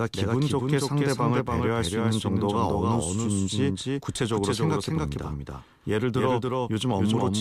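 From the very start and right through the clip, the speech has a doubled audio track: a second full-band copy trails the first by around 300 ms, sitting roughly 5 dB below it. It doesn't decay or pick up any room colour the way a real echo would, so it sounds like a clean, flat repeat chasing the original. That points to a likely cause of the same audio being captured again through a slower path, or an edit leaving two offset copies in the mix.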